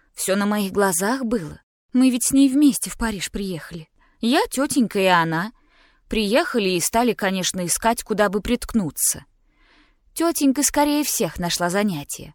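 Nothing technical goes wrong anywhere in this recording, so there's nothing to point out or time-stamp.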